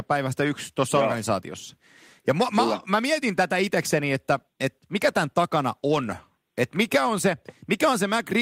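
No dropouts, distortion, noise bursts or level faults can be heard anywhere in this speech recording.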